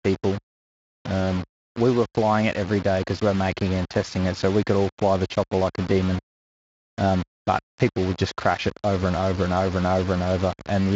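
From start to finish the speech carries a coarse, grainy distortion that tracks the voice, roughest on quiet syllables and decay tails, where sound sputters between a couple of levels or drops out. This is likely low bit depth without dither: samples rounded to about 5 bits, leaving an error only around 15 dB below the speech. A waveform shows visible stair-steps, and a spectrogram shows broadband hash following each syllable up to the Speex band edge near 7.6 kHz.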